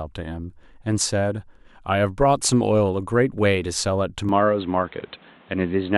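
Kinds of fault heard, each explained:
Input switched to a poorer device: the recording likely changed mid-take to a narrower-band input. From 4.29 s to the end, the speech loses everything above 4.2 kHz and turns dull, with new background noise well below it, no gap, and unchanged level.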